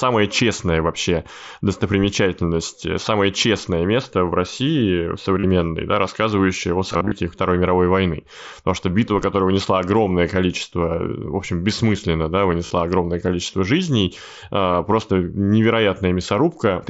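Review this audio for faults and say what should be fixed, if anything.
Brief buzzy, held-level patches break into the speech at 5.40 to 5.44 s, around 6.92 to 7.12 s just after "да рассказывающее о", at 12.66 to 12.71 s between "общем бессмысленно да" and "огромное количество жизней", and at 14.72 s. Each ends in a slight warble. This is concealed Bluetooth headset packet loss. Lost voice packets, from about 15 to 128 ms per event, were filled by repeating the closest-matching slice of recent waveform. Near 7 s, scattered losses over about 195 ms, with runs up to 45 ms, make up the largest loss, about 128 ms. Keeping the headset close to the phone, with a clear path and less 2.4 GHz interference, would prevent it.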